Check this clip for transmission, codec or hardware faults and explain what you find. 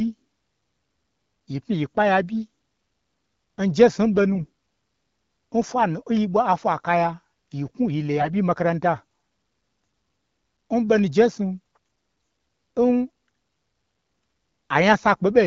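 Two brief bursts of AMR bit errors are audible, at 4.35 to 4.45 s and 8.20 to 8.27 s, on wideband speech whose clear coding fits AMR-WB at 12.65 kbit/s. Corrupted bits in the weakly protected part of each frame passed the checksum, so the decoder misplaced excitation pulses and misread fine pitch, gain and spectral values. The voice keeps its pitch and level but turns hoarse and gargly, harsher in the second, denser burst. Packet loss would instead cause gaps or smeared repeats.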